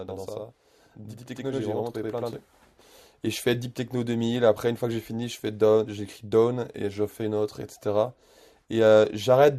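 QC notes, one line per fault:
0.00–2.33 s, channel delay (doubling): the speech has a second copy trailing it at equal loudness, heard as a slap echo about 85.3 ms behind every syllable onset. One channel arrives late by a long buffer, which fits a 4096-sample buffer at 48 kHz. When the two channels are folded to mono, the late copy stands apart rather than blending, so each sound is doubled.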